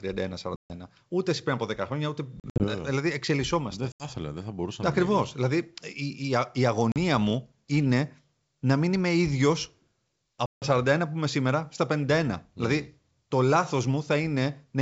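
Packet loss on an ADPCM call cuts hard silent holes into the speech at 0.56–0.72 s, 2.40–2.68 s after "χρόνια ούτε", 3.92–4.08 s before "δεν θα μπορούσα να", 6.92–6.97 s before "μου είναι να μην", and 10.46–10.68 s. Each hole is two to seven packets. After each one the decoder's predictor and step size no longer match the sender's, so the speech returns slightly distorted. It settles within tens of milliseconds.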